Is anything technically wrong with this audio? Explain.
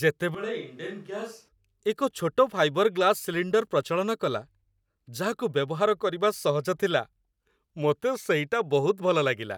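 Yes, there's one problem. From 0.35 to 1.48 s the speech turns roomy, hollow and thin, drops roughly 10 dB and picks up background noise, likely a switch to a distant microphone.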